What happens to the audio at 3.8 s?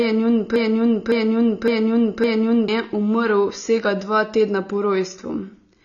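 At 3.8 s, as across the whole clip, the speech sounds dull and fizzy. This is likely AAC compression at a low bitrate, around 24 kbps, which drops everything above 7.1 kHz. A spectrogram shows a flat ceiling with patchy holes beneath it.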